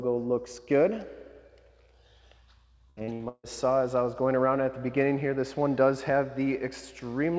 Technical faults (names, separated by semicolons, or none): repeated packet loss (robotic sound)